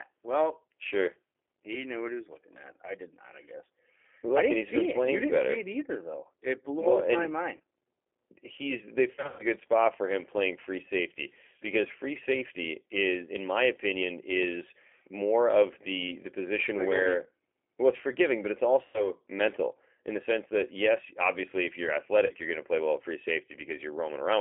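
Across the whole speech recording the sound is narrow, rough and faintly synthetic, confined to a telephone band of about 300 Hz to 3.4 kHz, with plainly audible coding damage. This is G.729 codec processing at 8 kbit/s, most likely the G.729A variant. Instead of sending the waveform, it rebuilds each short frame from a vocal tract filter, a pitch predictor and a handful of pulses. At four points the sound smears into a stretched, fading sound and then sounds weak or distorted for a moment afterwards: 7.57 to 7.61 s, 9.15 to 9.45 s, 18.85 to 19.10 s and 22.26 to 22.32 s. This is VoIP packet loss concealed by the speech codec. The decoder fills each gap by extending its last pitch and filter at falling gain. The two short events cover about 30 ms each, which fits a single lost packet. At 18.85 s about 90 ms is missing. Around 9.15 s about 180 ms is lost in patches spread over 240 ms, with the longest run about 120 ms, so the concealed stretch there is longest.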